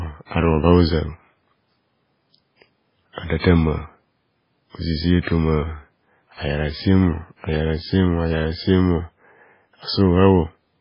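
From start to end, the speech carries heavy damage, likely from MP3 compression at a very low bitrate, which fits about 16 kbps. Nothing survives above 5.3 kHz, leaving a flat ceiling on a spectrogram, while starved weak components flicker as speckled holes, giving a watery, swirly sound with smeared consonants.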